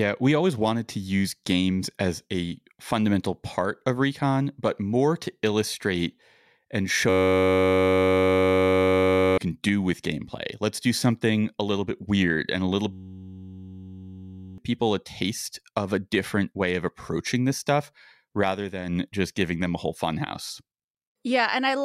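A steady 93.8 Hz buzz replaces the speech from 7.09 to 9.38 s, after "more to illustrate and", and again from 12.93 to 14.58 s, after "weird and a little". Each is a system hang loop: the system froze while the hardware kept replaying one 10.67 ms chunk, which fits a 512-sample buffer. The first loop costs about two seconds of audio and the second about one and a half.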